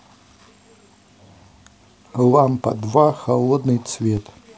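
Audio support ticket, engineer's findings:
DC step at 4.17 s: single low thump near clip end, speech continues unchanged. Zero line jumps by about -22 dBFS, then decays as a 20 Hz high-pass bleeds it off. Probable converter recalibration or offset input switching. Unlike a dropout click: no gap.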